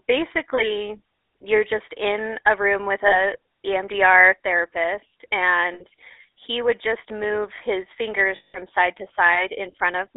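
From start to finish the speech carries the GSM full-rate codec's signature: a buzzy, gravelly roughness laid over every syllable, with the band held to roughly 300 Hz to 3.7 kHz, which fits the 13 kbps full-rate coder. The damage is plainly audible. Unlike plain band-limiting, which only dulls the sound, this grit comes from the coder rebuilding the excitation from sparse, regularly spaced pulses, so the roughness sits inside the voice itself.

Three bursts of lost GSM frames break in on top of that. The first runs from 3.08 to 3.21 s, the second from 5.74 to 5.85 s, and the third, the longest, from 8.36 to 8.56 s. Each time the decoder keeps replaying the last good frame, so the sound freezes into a rough, metallic ring instead of dropping straight to silence or clicking. The longest gap, about 180 ms, is where the ring hangs on longest.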